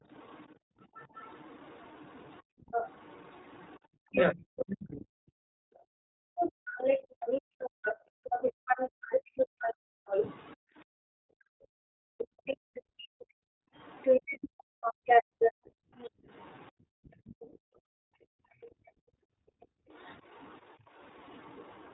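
Across the whole speech clip runs the iLBC codec, in a mode that fits its 20 ms frames at roughly 15 kbps. Each frame's excitation is coded on its own, and nothing above 4 kHz survives, so the voice sounds slightly rough and synthetic, with plainly audible codec damage. On a spectrogram the energy stops flat at 4 kHz, and harmonics look smeared and grainy rather than clean.

The clip opens with speech suppressed in double talk from 0.0 to 0.1 s. With both sides talking at once, the echo canceller likely could not tell the local talker from the loudspeaker echo and pulled everything down by roughly 30 dB. The waveform starts with a brief, sharply thinned envelope, and the spectrogram shows a momentary vertical fade before full level arrives. The same suppression returns, deeper at around 40 dB, from 4.12 to 5.05 s, from 13.01 to 13.31 s and from 16.96 to 17.08 s. The longest lasts near 0.7 s. 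The shorter ones sound like quick dips or clipped syllable edges, and each appears as a gap or notch in the envelope.

From 0.14 to 16.71 s the other side's voice leaks through, likely because the echo canceller left much of the loudspeaker signal in the microphone path. It sits at about the same level as the main talker, so two voices overlap for most of the clip. On a spectrogram, two independent sets of pitch harmonics interleave. A second, much fainter leak runs from 18.61 s to the end, about 25 dB below the speech, and shows as a faint ghost of harmonic traces under the main voice.

Between 0.55 and 0.89 s the background is gated by the echo canceller. The room sound falls by about 40 dB for roughly a third of a second and then returns. The same gating comes back from 2.43 to 19.9 s, totalling around ten seconds of intermittent drop-outs. Each one is a dip or drop-out in the room tone. 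On a spectrogram the noise floor vanishes to near-black in blocks, and in the waveform the low-level hiss between phrases shrinks sharply.

From 2.22 to 2.25 s come lost iLBC frames, consistent with a single dropped 20 ms packet. The decoder bridged the gap by repeating the last pitch cycle mixed with noise, so the sound holds for an instant as a faintly buzzy, breathy vowel, and the voice is correct again immediately. On a spectrogram this is a short stretch of frozen, slightly blurred harmonics. The waveform shows a brief repeating periodic pattern.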